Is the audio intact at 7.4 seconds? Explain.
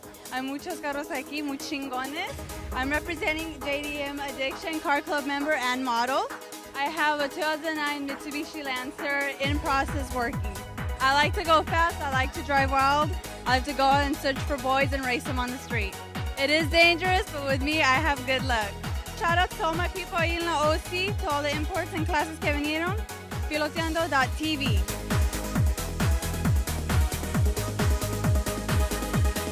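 Yes, the audio is intact at 7.4 seconds, with no dropout, click, distortion or other fault audible at that point.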